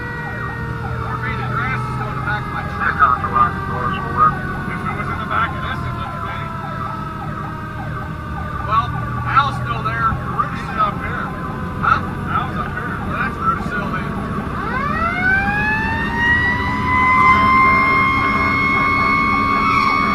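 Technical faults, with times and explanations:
No technical faults detected.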